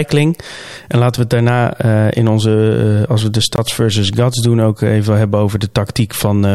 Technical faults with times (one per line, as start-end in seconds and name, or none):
1.17 block of digital silence
3.56-3.58 block of digital silence